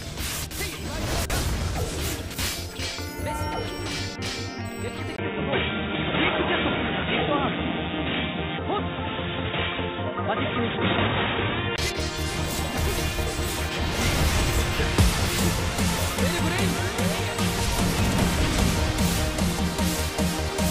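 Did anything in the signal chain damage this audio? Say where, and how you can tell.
Yes, at the input-device stage. A 20 ms gap at 5.16 s precedes audio cut off above 3.8 kHz, with a faint new noise floor, until 11.78 s. That is likely an input switched to a poorer device. A codec downgrade would not bring its own background noise.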